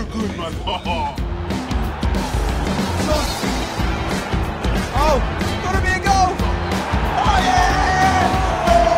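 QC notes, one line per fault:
2.60–6.05 s, call bitrate drop: around 2.6 s the sound goes coarse and muffled and stays that way for roughly 3.4 s before clearing up at about 6.05 s. That's the encoder being told its bandwidth shrank and spending far fewer bits, which fits a fall from about 128 kbps to roughly 12 kbps. At that rate it codes everything much more crudely and trims off the top end, so you get that rough, dull texture until the rate comes back.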